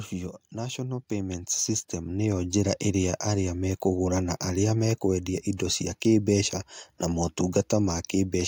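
From 0.52 s to 2.78 s, automatic gain rising: the gain control judged the input too quiet and lifted it by about 9 dB over roughly two seconds. Unlike a talker simply speaking up, the background noise swells in step with the speech.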